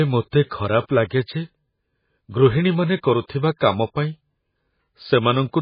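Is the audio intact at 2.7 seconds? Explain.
No. At 2.7 seconds the speech carries the damage that runs through the whole clip, most likely MP3 compression at a very low bitrate, around 16 kbps. Short of bits, the encoder discards everything above 5 kHz and drops weak frequency lines that blink on and off between frames, giving a dull, watery, swirling sound with chirpy sibilants and smeared attacks. A spectrogram shows a flat ceiling at 5 kHz and speckled holes below it.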